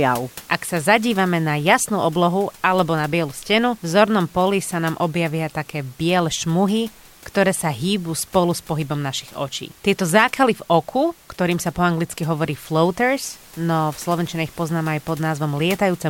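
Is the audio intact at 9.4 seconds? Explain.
Yes, the audio is intact at 9.4 seconds: the speech carries through cleanly, with only the room's own background noise sitting about 25 dB beneath it.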